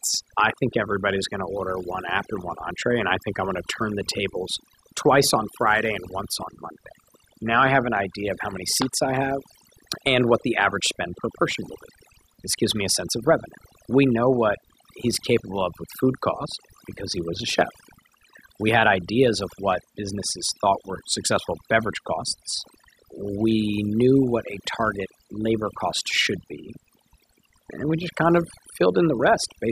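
Throughout the speech, overdone noise removal pulls bands near the noise estimate far down, leaving near-silent, twinkling gaps and a voice with quiet detail lost.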